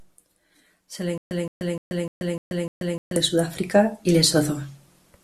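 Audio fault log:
1.18–3.16 s, stutter with silent gaps: one 169 ms fragment of speech repeats six times, each followed by 132 ms of dead digital silence, a steady 300 ms cycle. This is likely a stalled stream replaying its last buffered fragment at each retry, so the speech meant for that span is lost.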